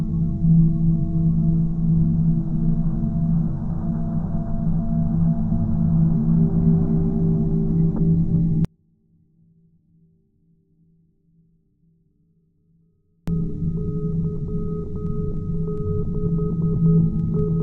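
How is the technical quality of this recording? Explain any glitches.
The recording has two kinds of glitch: two short jumps where compressed audio is missing, and one long dropout in the middle.

At 2.52 s and again at 17.34 s, compressed frames are skipped. The audio leaps forward by roughly 300 ms and then roughly 200 ms. That fits whole frames of about 26.1 ms being lost or rejected by the decoder.

From 8.65 s to 13.28 s there is an audio dropout to a faint residue. For about 4.6 s the sound falls abruptly to a faint trace roughly 40 dB down and then snaps back. The likely cause is that the wanted signal was lost while the path after the break stayed live. The hard edges at both ends distinguish it from a natural pause or a fade.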